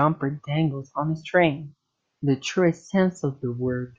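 No technical faults occur at any point in this speech clip.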